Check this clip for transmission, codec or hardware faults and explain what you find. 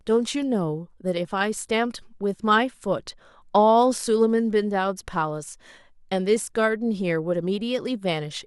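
No technical fault can be heard anywhere in the speech, and the signal stays intact and continuous throughout.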